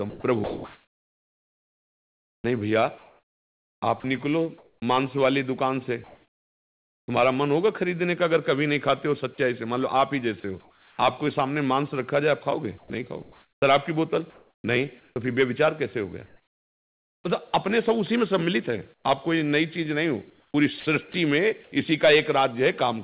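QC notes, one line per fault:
0.1–7.08 s, 12.78–17.24 s and 18.94–21.72 s, sound chopped by the voice detector: the speech stutters in and out, with about 4.3 s, 2 s and 0.5 s of it replaced by a flat synthetic hiss in those three stretches, so quiet syllables and word edges vanish. The likely cause is a sender voice detector repeatedly gating transmission and the receiver filling each gap with RFC 3389 comfort noise.
10.4 s, sound dropped by the voice detector: a 40 ms sliver of speech gives way to steady noise before the signal returns. This is likely a sender detector misjudging the sound as background and stopping transmission, with the receiver substituting comfort noise for the missing audio.
10.4–10.98 s, comfort noise in place of the background: the room tone loses its texture and turns into an even, featureless noise for about 0.42 s, still band-limited below 4 kHz like the rest of the G.711 call audio. 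The likely cause is discontinuous transmission, where the sender went quiet during a pause and the receiver synthesised roughly matched noise until sound resumed.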